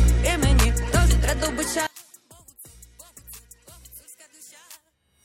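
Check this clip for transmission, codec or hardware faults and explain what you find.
One fault is present, running from 1.87 s to the end at 5.24 s. One channel inverted is the likely cause: with one stereo channel's polarity reversed, the shared content cancels when summed to mono, so everything from 1.87 s onward drops by about 27 dB, leaving only the residual mismatch between the channels.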